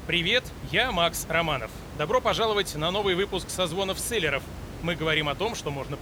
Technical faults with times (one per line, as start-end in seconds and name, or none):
none